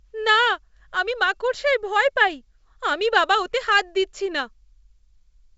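This speech clip has no technical faults; it comes through G.722 wideband telephone coding at 64 kbit/s, with nothing above about 7.7 kHz.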